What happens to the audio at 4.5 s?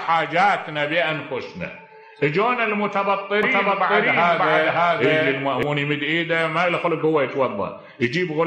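At 4.5 s you're right in the middle of a doubled audio track that runs from about 3.43 to 5.63 s. A second, full-band copy of the same sound sits roughly half a second behind the original at about the same loudness, so everything seems to echo back cleanly, with no decay or room colour on it. It cuts in and out abruptly at those edges, likely from the signal being captured twice through a slower second path.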